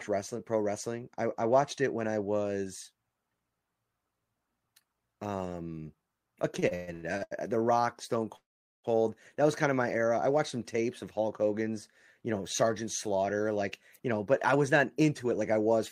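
From 6.59 to 7.33 s there are repeated stalls (stutter). Late packets kept emptying the jitter buffer. Six gaps, the longest 124 ms, fill about half the span.

At 8.36 s a call audio freeze inserts about 0.48 s, mostly silence, before resuming at 8.86 s. Delayed packets likely drained the jitter buffer.

From 13.62 to 15.52 s a jitter buffer speed-up trims short pitch-period pieces. The speech runs at 106% speed, losing about a tenth of a second, at unchanged pitch.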